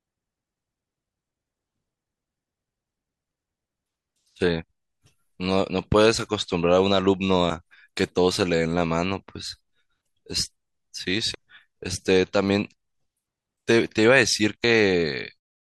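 At 11.34 s and again at 14.64 s, the speech breaks briefly. This is damaged data in a compressed stream. The decoder misreads corrupted frames, loses sync and skips ahead to the next header. A clean fade-out closes the clip.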